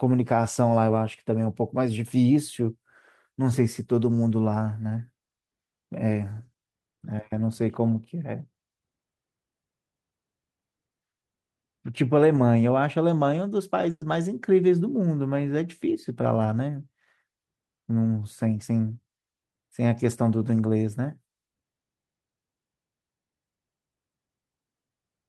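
Speech, with two network dropouts close together. At about 12.36 s there's a short concealed packet loss: roughly 10 ms never arrived, and the decoder papered over it by extending the last sound, so you get a tiny smear or wobble rather than an actual hole. Then from 13.90 to 14.02 s comes a burst of packet loss, about 110 ms gone in a row. The receiver keeps the previous sound going and fades it down, and you can hear that as a held buzz or hiss that drops into roughly 30 ms of silence before the talker picks up again further along, with that stretch of speech simply missing.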